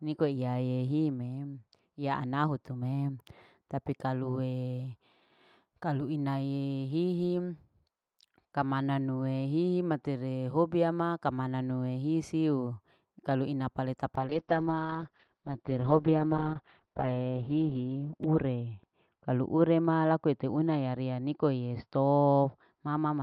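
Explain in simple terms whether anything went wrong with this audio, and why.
At 14.16 s the speech turns muffled and rough, and stays that way to the end. This is a call bitrate drop: the connection's capacity fell, so the encoder squeezed the audio hard, cutting everything above 4 kHz and coding what remained coarsely.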